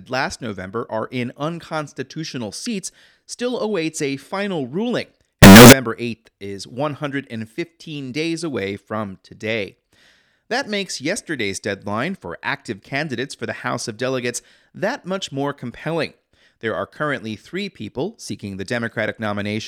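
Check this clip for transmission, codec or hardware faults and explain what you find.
There's one fault, a short burst just after "awaits a final ruling", from 5.43 to 5.73 s. For those 0.3 s the speech turns into a blast of harsh, square-edged sound at an almost fixed, high level, with the background noise pushed up as loud as the talker, though the pitch contour still comes through. That's likely float read as integer: 32-bit float samples interpreted as 32-bit integers, so sign and exponent bits dictate the level.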